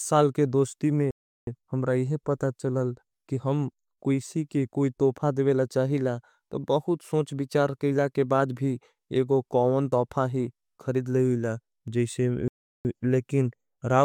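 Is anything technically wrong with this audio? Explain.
Yes. A rebuffering stall occurs twice, from 1.11 to 1.47 s just after "के दोष्टी" and from 12.48 to 12.85 s, adding about 0.36 s and 0.37 s respectively. The player ran dry and paused for data. Unlike a dropout, the speech resumes exactly where it stopped, with nothing missing.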